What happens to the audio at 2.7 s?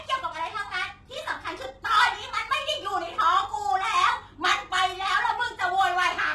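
At 2.7 s the speech's s sounds turn gritty and lispy, with nothing above 12.3 kHz, as they do throughout. This is likely HE-AAC compression at a very low bitrate, fitting around 16 kbps, rebuilding the treble by copying lower bands upward, so the harmonics misalign.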